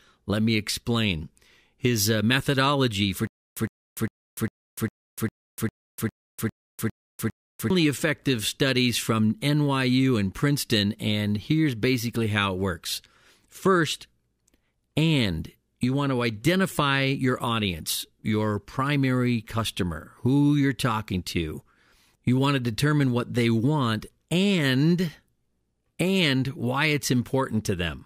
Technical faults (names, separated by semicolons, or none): stutter with silent gaps